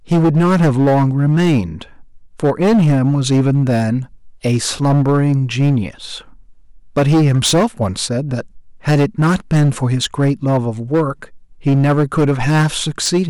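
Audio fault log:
throughout, hard clipping: the speech is driven about 10 dB past full scale, so around a tenth of samples are flattened, adding harsh high harmonics as fuzz.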